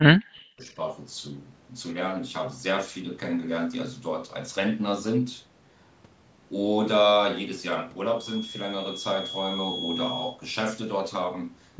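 Right at the start, from 0 to about 0.77 s, the speech ducks and chops in and out, dropping by roughly 40 dB at its deepest, with about half a second of it affected overall. That pattern is most likely speech suppressed in double talk: with both ends talking at once, the echo canceller couldn't tell this talker apart from the loudspeaker echo and turned the lot down. The call's microphone processing caps everything at 8 kHz.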